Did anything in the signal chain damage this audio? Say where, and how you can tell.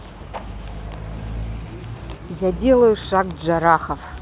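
No, nothing in the signal chain damaged this audio.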